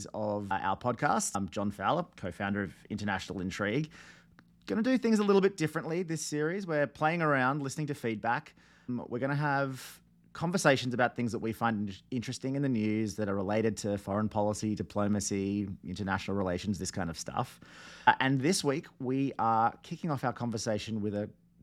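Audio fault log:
No faults detected in this speech recording.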